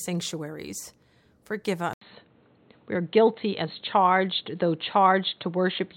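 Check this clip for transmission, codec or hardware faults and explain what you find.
One fault. At 1.93 s, after an 80 ms gap, the speech turns dull to the end, with nothing above 4.2 kHz, a level shift and faint new noise. The input likely switched to a poorer device.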